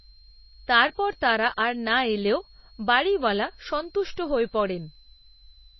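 Right through the speech there's a switching supply whistle, a high tone wandering between about 4.0 and 4.3 kHz, roughly 30 dB down, from a supply bursting audibly or beating against another. The whole clip also has plainly audible, watery smearing and nothing above 5.8 kHz, likely MP3 compression at a low bitrate, somewhere around 24 kbps.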